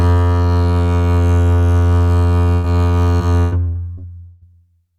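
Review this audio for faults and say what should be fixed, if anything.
Burst of packet loss at 2.53 to 2.66 s: about 100 ms of the music never arrived, so the receiver stretched the last sound into a held, fading tail before playback jumped ahead with that stretch missing. A larger jitter buffer or forward error correction would cover a single burst like this.

Repeated packet loss (robotic sound) from 3.17 to 4.55 s: six separate gaps, the longest 160 ms, were each patched by extending the preceding sound, so about a third of that span is concealment. The music turns choppy, with pieces dropping out. Fixing the unstable network path, or adding redundancy and interleaving, would prevent these repeated dropouts.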